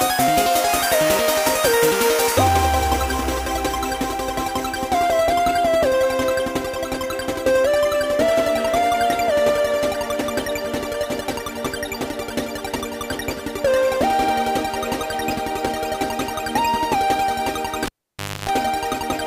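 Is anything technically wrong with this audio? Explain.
Yes, one fault. From 17.86 to 18.49 s, a cable is pulled and plugged in. There's a pop and about 0.59 s unplugged, near silent except for 0.28 s of 50 Hz mains buzz while only the tip touches, then another pop as the sound returns.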